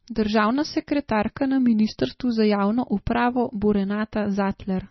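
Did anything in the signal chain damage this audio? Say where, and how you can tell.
Yes: the codec stage, likely a heavy MP3 encode fitting about 24 kbps, starved the bits, cutting everything above 5.9 kHz and leaving watery, swirling speech with smeared attacks throughout.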